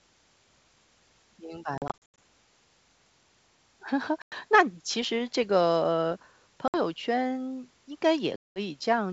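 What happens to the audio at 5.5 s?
Nothing goes wrong at 5.5 s: the speech carries on intact there, passing through G.722 wideband telephone coding at 64 kbit/s with no more than faint coding damage.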